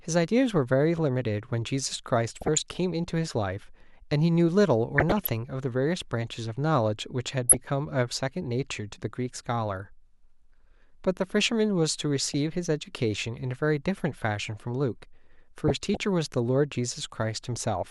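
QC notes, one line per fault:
2.28–2.72 s, 4.95–5.29 s, 7.48–7.67 s, 12.25–12.34 s, 15.68–16.03 s, DAB burbling: weak reception lets residual bit errors, a few tenths of a percent, slip past error correction into the MP2 audio data. Corrupted samples put short blips of noise into single sub-bands and corrupted scale factors make sub-bands leap in level for up to a frame, so the speech is overlaid with burbling blips across each span.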